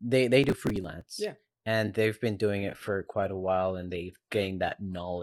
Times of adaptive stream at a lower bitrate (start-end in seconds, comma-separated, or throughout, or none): 2.57-5.22